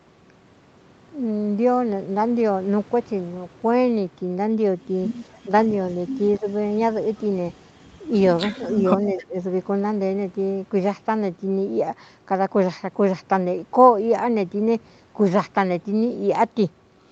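At 5.64 to 5.94 s a faint delayed copy of the speech appears, trailing the original by 267 ms and sitting about 25 dB below it. This is echo leak, likely from a far-end loudspeaker whose echo canceller let part of the pickup return down the line. It recurs at 6.37 to 6.51 s at about 30 dB down, at 8.45 to 8.74 s at about 25 dB down, and at 8.98 to 9.24 s at about 20 dB down. Each time it is a short ghost of the talker at the same 267 ms lag.

Overlapping these scraps, the talker's own speech is turned down. At 6.40 to 6.46 s it dips by about 10 dB, at 8.58 to 8.90 s by about 5 dB, and at 9.14 to 9.36 s by up to about 20 dB, in brief drops. This is speech suppressed in double talk: the canceller likely could not tell the local talker from the returning echo while both were present, so it attenuated everything.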